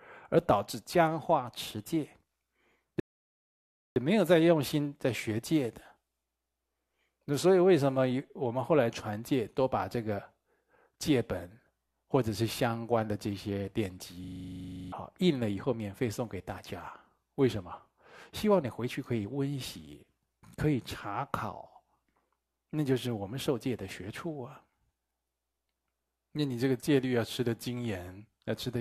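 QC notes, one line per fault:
3.00–3.96 s rebuffering stall: playback starves of data and drops to silence for 0.96 s, then resumes exactly where it stopped, adding time without losing anything.
14.24–14.92 s system hang loop: the output keeps cycling a frozen 40 ms buffer, repeating it 17 times at 25 Hz and dropping roughly 0.7 s.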